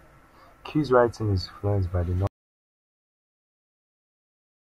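At 2.27 s, right after "influenced by the", the speech cuts off mid-phrase and the clip stays silent through to the end, a gap of about 2.4 s. This is an audio dropout to silence, likely from the input being lost while the recorder kept writing silence. Unlike a natural pause or a noise gate, no room tone or breath remains, and there is no fade, just an abrupt stop.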